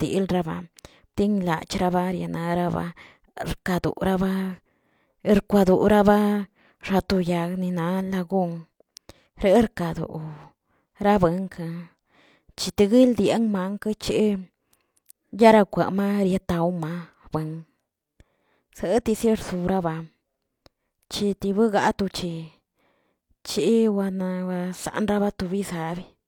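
No technical faults can be heard anywhere in this speech recording. Nothing in the playback breaks, stalls or changes character at any point.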